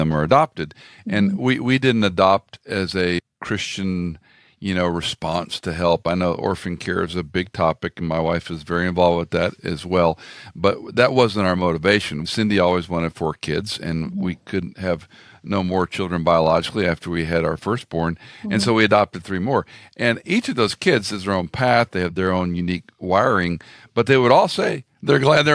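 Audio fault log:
No faults to log in this speech clip.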